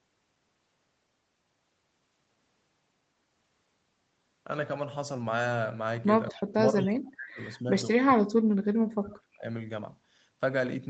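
Echo leak, 6.28 to 6.38 s and again 6.8 to 6.88 s: two brief, faint scraps of delayed speech trail the talker by 229 ms, the first about 20 dB below the voice and the second about 25 dB below. The likely cause is a loudspeaker on the far end whose echo canceller let part of its microphone pickup through, sending a delayed copy back down the line.

Speech suppressed in double talk, 6.32 to 7.38 s, 7.6 to 7.69 s and 7.95 to 9.45 s: the talker's level collapses by roughly 35 dB through the first stretch, barely dips in the short middle one, and falls by roughly 40 dB across the last, so the voice fades and breaks up in pieces. This likely comes from both sides talking at once, with the echo canceller unable to tell its own talker from the loudspeaker echo and turning everything down together.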